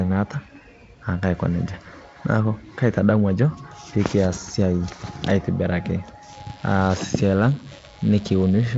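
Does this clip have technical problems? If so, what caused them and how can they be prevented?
Yes. From 6.33 s to the end at 8.77 s, a DECT cordless phone buzz sits roughly 25 dB under the speech. A nearby handset or base station transmits a radio burst every 10 ms, and the audio circuitry rectifies it into a thin 100 Hz buzz. On a spectrogram this appears as evenly stacked horizontal lines at 100 Hz and its harmonics, and on the waveform as regular spikes 10 ms apart. To prevent it, keep DECT equipment away from microphones and cables, and use shielded, balanced connections.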